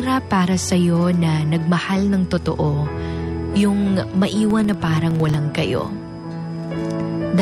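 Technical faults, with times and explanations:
4.37 to 5.41 s, filter restarted on every block: a filter in the processing chain loses its internal state at each block boundary and starts again from silence, so every block opens with a small transient before the filter settles. Those regular discontinuities come through as a buzz of ticks at about 21.5 Hz, which fits a 2048-sample block, and the buzz rises and falls with the level of the sound passing through.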